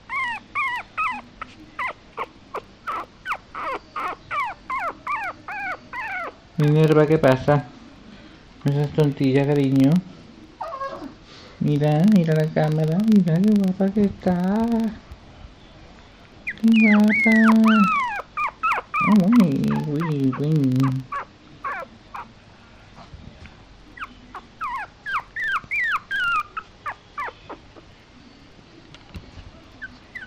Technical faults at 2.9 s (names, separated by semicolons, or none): filter restarted on every block